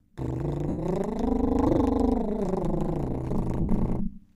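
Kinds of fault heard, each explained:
overlap-add ripple: The music was cut into windowed frames and rejoined with an overlap whose gains do not sum evenly, so the level dips by about 60 dB once per frame, around 200 times a second. The result is a constant rough, robotic buzz, not a brief dropout.
lost LE Audio frames: From 0.69 to 0.78 s and from 3.61 to 3.69 s, the decoder filled gaps of 90 ms and 82.5 ms by reusing the last spectrum with scrambled signs. Tones smear into noise and begin fading rather than clicking or cutting off hard.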